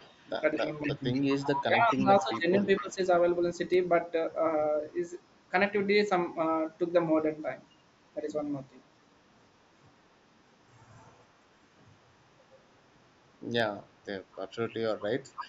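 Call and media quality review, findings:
Echo leak, 0.0–1.63 s, 1.99–2.84 s, 15.33–15.46 s: delayed copy of the speech about 15 dB down, 248 ms behind; spectrogram shows faint shifted duplicate of formants. Likely residual from far-end echo canceller.

Speech suppressed in double talk, 0.61–1.03 s (about 10 dB dip) and 1.65–2.99 s (about 15 dB, roughly a second in total): waveform envelope gouged during overlap. Likely canceller attenuating near-end speech along with echo.

Dropped samples, 3.74 s: single sharp click; a few samples lost, so the waveform steps and a thin full-height vertical line appears on the spectrogram. Likely a stream discontinuity.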